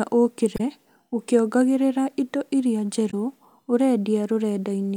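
A brief glitch breaks into the speech from 0.56 to 0.61 s, just before "ũkĩongagĩrĩra indo iria", and a second one from 3.10 to 3.14 s, right after "ũkĩongagĩrĩra indo iria". Both come from damaged data in a compressed stream. Corrupted bytes made the decoder misread those frames and lose sync, so it produced garbled output for a few tens of milliseconds until it locked onto a valid frame header again.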